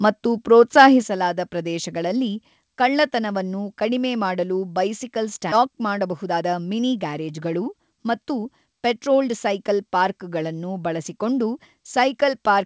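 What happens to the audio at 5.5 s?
At 5.52 s, right after "ಕಳ್ಳತನವನ್ನು ಕಡಿಮೆ ಮಾಡಲು ಬೈಸಿಕಲ್", a skip ahead occurs: about a second of speech was discarded, so playback jumps forward with no gap. From 5.56 to 9.71 s, a jitter buffer speed-up trims short pitch-period pieces, totalling around 0.4 s, so the speech runs at 110% speed, hurried but at unchanged pitch.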